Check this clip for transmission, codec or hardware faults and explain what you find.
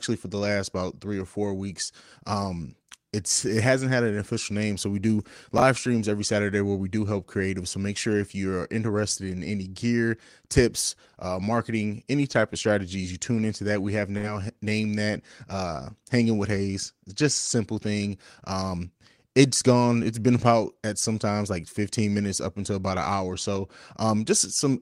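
Two faults are audible in this speech clip: a reordering of audio chunks and a burst of packet loss.

At 5.58 to 5.62 s, chunks out of order: one 20 ms chunk arrives a single slot late and plays after its successor. The speech jumbles briefly. Unlike a dropout, no audio goes missing and nothing fades.

At 14.17 to 14.26 s, a burst of packet loss: the receiver extends the last sound for 58 ms, fading it into a held buzz or hiss, then resumes 60 ms further on. Unlike reordering, that stretch of speech is gone rather than shuffled.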